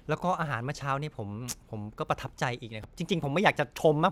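Speech clip with chunks out of order at about 2.83 s: a 5.8 ms chunk lands one chunk late, so there's a brief jumbled blip.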